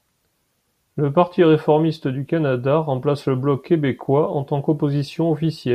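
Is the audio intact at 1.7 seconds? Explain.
Yes, at 1.70 s the speech plays through cleanly, with no dropout, click, distortion or other fault at that point.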